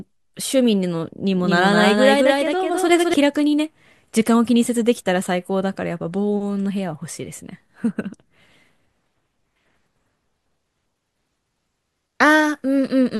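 A speech clip with a doubled audio track from 1.34 to 3.14 s: a full-band copy trails about a fifth of a second behind, somewhat quieter. Unlike an echo, it has no decay or room colour and switches on and off abruptly, likely from a second, slower capture path.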